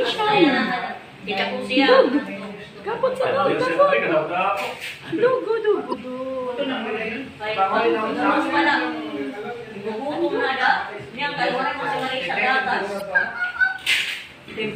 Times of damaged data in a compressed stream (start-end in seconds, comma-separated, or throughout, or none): 5.89-5.94, 12.97-13.01